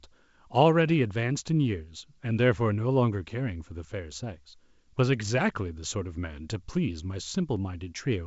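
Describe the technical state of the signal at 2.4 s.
At 2.4 s the signal is intact, with the G.722 wideband telephone coding at 64 kbit/s adding at most faint damage at that moment.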